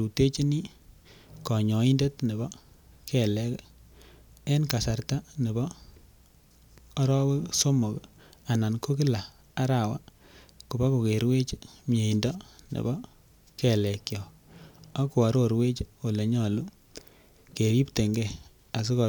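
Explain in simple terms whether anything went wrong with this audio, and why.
Nothing went wrong with this speech recording. At no point in the audio can any technical problem be heard.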